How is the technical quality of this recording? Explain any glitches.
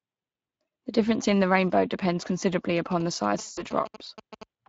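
The recording has clear technical problems: a codec coloration that runs the whole length, plus two overlapping glitches near the end.

Speex codec: Throughout, the speech sounds noisy and hoarse, with plainly audible coding damage. This comes from a CELP codec at a rate that fits roughly 20 kbps, where coarse excitation coding roughens the voice. On a spectrogram, the harmonics look smeared and grainy rather than crisp.

GSM signalling bursts: From 2.77 to 4.43 s, a galloping dit-dit-dit of short buzzes sits around 15 dB below the speech. A nearby 2G phone signalling in bursts is picked up and rectified by the audio circuitry. A spectrogram shows regular vertical stripes and a 217 Hz comb.

VoIP packet loss concealed by the speech codec: From 3.41 to 3.64 s, about 160 ms of audio was lost, which fits eight 20 ms frames. The decoder extended the last pitch and filter at falling gain, so the sound becomes a fading buzzy tone or coloured noise. 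The waveform shows a repetitive, shrinking envelope, and the voice stays weak briefly afterwards.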